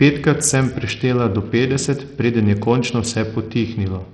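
From start to finish the speech carries heavy codec damage, and it's most likely Bluetooth SBC compression. There's nothing above 17 kHz, and what's left sounds coarse and gritty, as if the upper bands were starved of bits and everything else was quantised roughly. That fits a low-bitrate SBC link, somewhere around 64 kbps, where the simple encoder can't spend enough bits to keep the detail clean.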